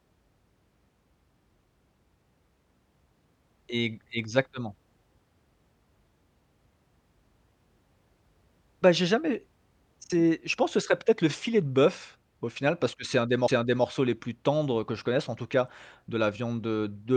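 At 13.48 s the speech is broken by a CD skip. The laser lost its place on the spiral track and landed on another turn, so the player muted for only a few milliseconds and then carried on from a different point in the recording. It is heard as a brief tick followed by a jump in the speech. That jump sets it apart from a plain click or dropout, where the audio resumes exactly where it left off.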